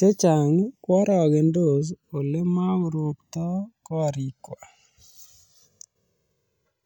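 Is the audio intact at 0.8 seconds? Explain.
No. Channels drifting apart affects 0.8 s, as it does the whole speech clip. Each channel seems to run on its own clock, mismatched by around 300 ppm, so the inter-channel delay creeps toward about 2 ms, sweeping comb notches and giving slow flanging.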